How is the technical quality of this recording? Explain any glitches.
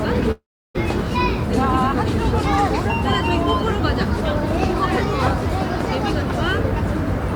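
The recording has four audible glitches: a long dropout near the start, a single click, and two pops.

From 0.31 to 0.76 s, a long network dropout likely removed about 440 ms of audio. The receiver extended the last sound as a fading buzz, leaving roughly 340 ms of silence before the audio resumes further on.

At 2.68 s, dropped samples, likely a fraction of a millisecond, make the waveform jump abruptly. This is heard as one sharp, brief click.

At 3.47 s and 5.81 s, a loud pop, likely from a voltage spike, peaks roughly 10 dB above the sound for about 25 ms each time, with the audio continuing underneath.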